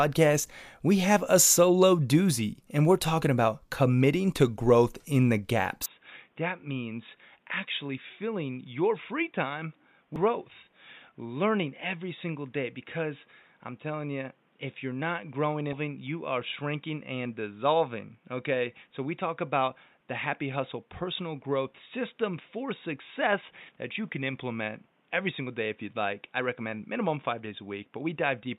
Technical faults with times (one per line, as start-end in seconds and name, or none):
5.86-28.58 input switched to a poorer device
10.16 damaged data in a compressed stream